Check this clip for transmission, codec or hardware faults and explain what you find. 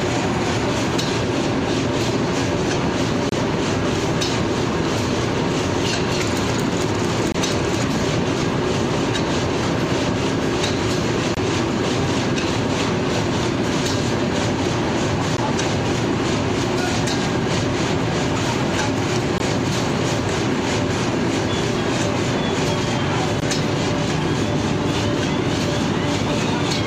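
Two faults can be heard: a series of evenly spaced short silences, and a single click.

Gap between stream segments at 3.29, 7.32, 11.35, 15.37, 19.38 and 23.40 s, each 13 to 28 ms long. These recur every 4 s, where mismatched segment timestamps leave holes that the player fills with silence. They show as hard-edged blank columns on a spectrogram and flat stretches in the waveform.

Dropped samples at 14.66 s give one sharp click, likely from under a millisecond of missing audio. They appear as a sudden step in the waveform and a thin vertical line on the spectrogram.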